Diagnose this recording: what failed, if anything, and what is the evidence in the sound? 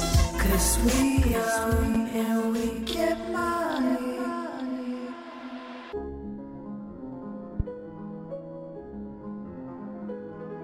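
Two sharp pops land on top of the sound at 1.95 s and 7.60 s, each about 30 ms long and roughly 10 dB and 15 dB above it, with the audio continuing underneath. Each loud pop is likely a voltage step in the analogue wiring, from a connector, switch or static.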